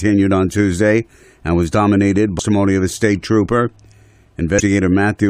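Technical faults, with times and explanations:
2.38 s and 4.59–4.61 s: damaged data in a compressed stream. A short blip lands after "and was dominated", before "of a state trooper", and again near the end. Corrupted bytes made the decoder misread frames and resynchronise at the next valid header.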